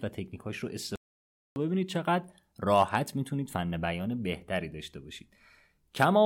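At 0.96 s the speech cuts out mid-flow and the output falls silent for about 0.6 s, resuming at 1.56 s. This is a playback stall. The player likely ran short of data or had its output thread held up, so nothing reached the output until it caught up. On a waveform the gap shows as a flat line between two abrupt edges, and a spectrogram shows a clean vertical band empty across all frequencies.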